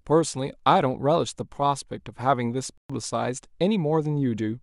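At 2.78 s the speech drops out for 120 ms, a playback stall likely from data starvation: flat waveform, blank spectrogram column, then resumption.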